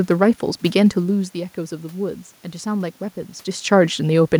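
Speech recording with no technical faults to report.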